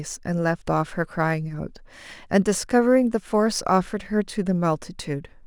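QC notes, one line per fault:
Throughout, sample clock jitter: an unstable converter clock, wandering by a couple of microseconds, mistimes each sample, adding a faint hiss about 40 dB below the speech. It grows on loud, bright sounds and vanishes in pauses, appearing on a spectrogram as a high-frequency noise haze that tracks the speech energy.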